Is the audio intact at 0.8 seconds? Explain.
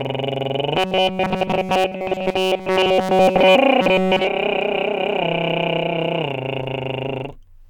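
No. At 0.8 seconds you're inside a stretch of robotic sound from repeated short buffers, running from about 0.76 to 3.56 s. The music turns into a hard, metallic buzz at 188 Hz that only loosely tracks the original. The likely cause is new audio showing up too rarely, so a tiny slice of roughly 5 ms gets looped over and over while the real audio in that stretch is essentially all skipped.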